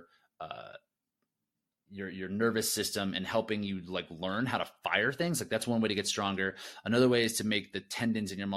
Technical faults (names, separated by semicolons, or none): none